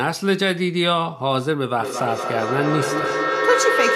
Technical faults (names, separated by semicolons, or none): feedback echo between two devices